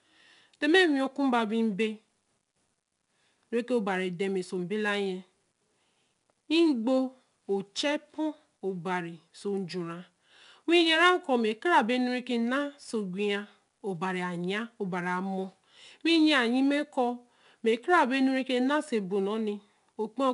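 Throughout, 4-bit ADPCM compression leaves gritty, level-tracking hiss on loud speech and roughened attacks. Nothing sounds above 10.6 kHz, which fits an 89 kbps stream.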